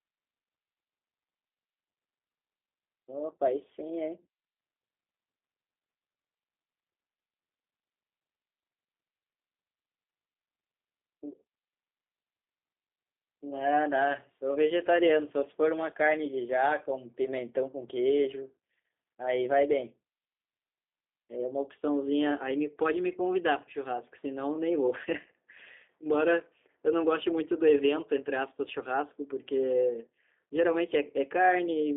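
From start to finish the speech carries G.729 codec damage: a rough, slightly synthetic buzz, as pulse-coded excitation replaces the real waveform. That texture, which fits an 8 kbit/s G.729A stream, sets it apart from simple band-limiting. The sound sits between 250 Hz and 3.6 kHz.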